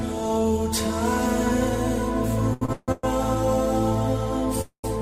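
Between 2.53 and 3.05 s the audio catches and drags in four short hitches, the longest about 153 ms, with the last sound smeared forward to cover roughly three quarters of that stretch. These are repeated stalls (stutter): packets arrived late, the jitter buffer kept running dry, and the receiver stretched the preceding sound until data resumed, so nothing is lost but the flow is broken up.

At 4.61 s the last sound hangs and fades, then drops to silence for about 110 ms before resuming at 4.86 s, a pause of 226 ms in all. This is a call audio freeze, likely from packets held up in transit that emptied the jitter buffer, after which playback picked up where it had stopped.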